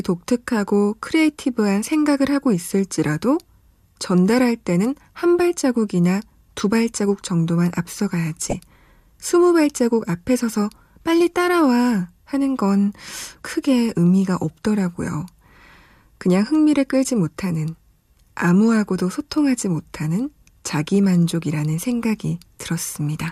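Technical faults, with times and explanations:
8.50 to 8.55 s, DAB burbling. A brief burst of burbling breaks over the speech. It lasts about 50 ms. Weak reception let bit errors slip past the error correction into the MP2 audio data. Corrupted samples put short blips of noise in single sub-bands, and corrupted scale factors make sub-bands leap in level for up to a frame. That gives the burbling sound. The burst points to a short run of damaged frames, which fits a bit error rate of roughly 0.15 percent.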